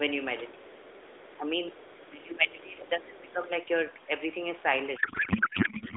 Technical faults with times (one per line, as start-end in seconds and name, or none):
1.77-2.09 other side's voice leaking through
2.10-3.49 speech suppressed in double talk
4.96-5.96 codec payload misread